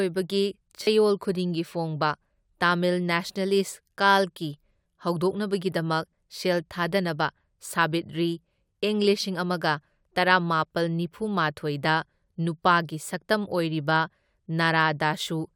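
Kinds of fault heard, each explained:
Repeated buffer: a buzz at 0.83 to 0.87 s as a slice fitting a 10 ms buffer replays four more times, new audio arriving late.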